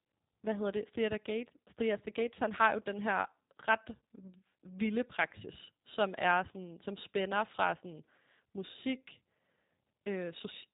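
G.729 codec damage throughout: speech rebuilt from a vocal tract model and sparse pulses sounds rough and synthetic, with nothing above 3.8 kHz, fitting 8 kbit/s coding.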